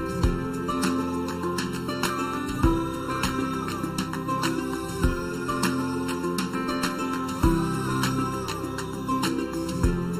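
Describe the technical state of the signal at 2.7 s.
At 2.7 s the sound shows channel delay (comb filtering), as it does across the whole clip. One channel arrives a fraction of a millisecond late, and the two are summed to mono. Content common to both channels cancels at evenly spaced frequencies. The first notch sits somewhere around 700 Hz, with further notches repeating above it. The result is a hollow, phasey tone with fixed gaps in the spectrum.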